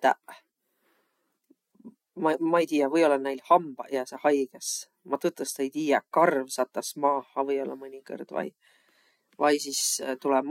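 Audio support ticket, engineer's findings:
No faults found on this clip.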